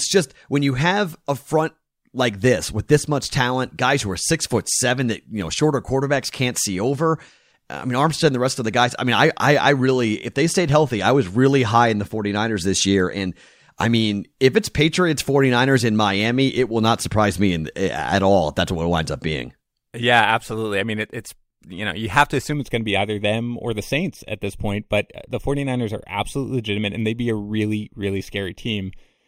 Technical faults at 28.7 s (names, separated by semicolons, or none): channel delay (comb filtering)